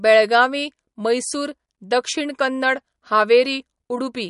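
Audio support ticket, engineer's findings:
Watery, swirly speech throughout; sibilants chirpy and metallic. Likely MP3 compression, sound fits roughly 48 kbps: weak spectral lines zeroed frame to frame. Spectrogram: hard shelf with nothing above 11.1 kHz, flickering holes and blocky patches below.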